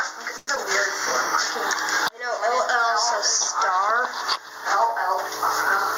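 Gain pumping runs through the whole clip, swinging the level by about 25 dB, likely from a fast limiter fighting excessive input gain. At 0.37 to 0.49 s comes a short stall from a late packet. The last sound is held for about 0.1 s, then resumes where it left off, so it is stretched rather than chopped. At 0.55 to 0.58 s, short concealed packet loss removes about 40 ms of audio, bridged by a brief synthetic smear. Playback jumps roughly 30 ms ahead, so here material is skipped, unlike the stall.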